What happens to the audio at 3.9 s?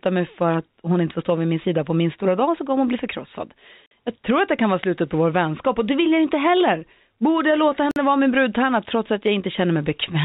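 At 3.86 s the speech drops out for 50 ms, until 3.91 s, a gap between chunks: silence is left at the join between 4-second blocks of audio, leaving a short silent hole. Nothing is lost; the sound simply resumes late.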